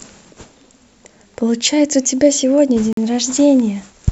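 A Bluetooth stall interrupts the speech from 2.93 to 2.97 s, a dropout of about 45 ms in which the sound cuts cleanly to silence before carrying on. The likely cause is radio interference delaying packets on the wireless link, so the headphones' buffer emptied and playback had to wait for the retransmitted audio to arrive. Heard in context, it is a brief, hard gap in the middle of the speech.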